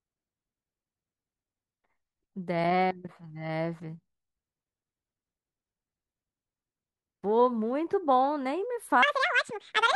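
This speech clip shows the fault called audio read two samples at a time (double speed), from 9.03 s to the end. In that last stretch the speech runs twice as fast and a full octave higher, 12 semitones. The reader is treating each pair of samples as a single frame, as if the data held two channels or samples twice as wide. Half the samples are effectively skipped, so the timeline halves and every pitch doubles. High-frequency content that no longer fits folds back down as aliasing. On a spectrogram the harmonic spacing and formant bands jump to double their height at 9.03 s. On a waveform, syllable envelopes suddenly shrink to half their width.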